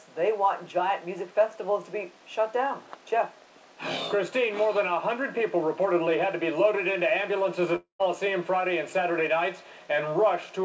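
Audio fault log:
7.76–8.02 s, long network dropout: the last sound smears into a fading buzz for about 0.23 s, drops to roughly 0.12 s of silence, then resumes with about 0.24 s gone. Likely packets stopped arriving, so the receiver stretched what it had, then gave up.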